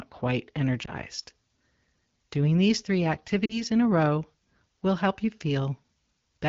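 Speech, carried over an AMR wideband link. Lost AMR speech frames cause a brief dip or warble at 0.85 to 0.91 s. Between "these three" and "in a row will", 3.46 to 3.64 s, sound drops to near silence. The decoder is concealing one, then two, missing frames.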